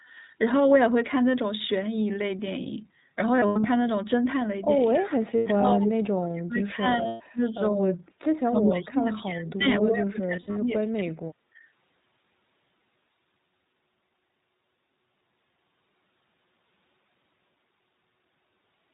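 The whole clip of speech runs through the iLBC codec, and the damage is plainly audible. The band stops at 4 kHz, so sibilants are dull and the voice has a slightly rough, synthetic edge. The character fits iLBC's 15.2 kbps mode with 20 ms frames, each frame's excitation coded on its own with no reliance on the one before. That independence shapes how the dropouts below recover.

The first lost iLBC frames fall between 3.36 and 3.66 s. About 180 ms of audio is missing, scattered across 280 ms, with the longest continuous gap around 100 ms. The decoder fills each hole by repeating the last pitch cycle with added noise, so the sound turns into a held, faintly buzzy vowel. Because the frames decode independently, clean sound returns as soon as packets arrive again.

From 4.95 to 6.0 s the talker's level drops, by about 30 dB at the deepest, over roughly 0.7 s in total. This is likely speech suppressed in double talk. 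When both ends speak together, the echo canceller cannot tell the near talker from the loudspeaker echo, so it attenuates both, and the voice dips and breaks up. Two more episodes follow. Between 6.29 and 8.17 s it reaches about 35 dB for roughly 1.5 s, and between 8.46 and 11.18 s about 25 dB for roughly 3 s.

Inside the first suppressed stretch, at 5.08 to 5.12 s, a brief echo leak is heard. It is a 40 ms scrap of the voice delayed by 260 ms and about 20 dB below the direct speech. The loudspeaker end's canceller likely did not fully remove what its microphone picked up, and the residue was sent back.

Further lost iLBC frames fall at 5.36 to 5.48 s (100 ms), 7.06 to 7.22 s (140 ms), and 10.36 to 10.58 s. The last of these is 140 ms scattered over 200 ms, with the longest run about 70 ms. Each gives the same short buzzy hold before an immediate recovery.

Between 11.49 and 11.66 s the room sound dips by 10 dB for about 150 ms and then comes back. 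This is background gated by the echo canceller: while the loudspeaker was playing, the canceller pulled the microphone down hard, taking the ambience with it until it released.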